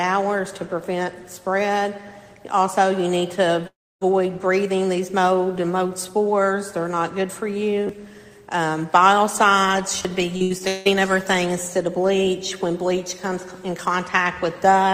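A long network dropout, the likely cause of the break from 3.67 to 4.03 s, interrupts the audio. About 340 ms never arrives. The receiver tries to cover the hole by extending the last sound, which decays into a fading buzz or hiss. For most of the span, roughly 290 ms, only silence or a faint steady floor remains. The audio then resumes further along, and the lost stretch is simply absent.

A repeated buffer occurs twice, at 7.87 to 7.89 s and again at 10.03 to 10.05 s. Each time, fresh audio misses its deadline, so the device replays its last 10.67 ms chunk twice more. That chunk length fits a 512-sample buffer. Because the repeated piece is so short, the hard joins merge into a brief click or tiny buzz. Roughly 20 ms of real audio is skipped each time.

Repeated packet loss, heard as robotic sound, follows from 10.37 to 10.87 s. Within that half second there are four separate gaps, the longest 174 ms, totalling about 320 ms missing. 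Each gap is patched by stretching the preceding sound, and about 61 percent of the span is filled this way. With holes arriving in quick succession, the result is choppy, with chunks of the audio dropped out.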